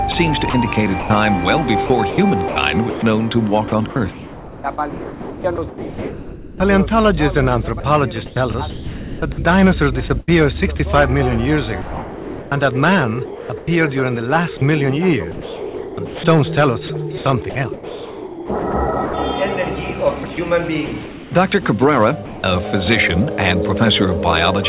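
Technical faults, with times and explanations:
0.12–6.6 s, 7.8–10.8 s, 11.8–13.7 s, 14.6–19.1 s and 20.2–21.3 s: sound chopped by the voice detector. Faint passages keep flipping between real sound and synthetic comfort noise, likely the sender's detector toggling repeatedly. It is a flicker, not one gap.
22.26–22.44 s: sound dropped by the voice detector. One 180 ms hole filled with steady comfort noise, likely the detector briefly mistaking the sound for background. A single dropout, with no flickering back and forth.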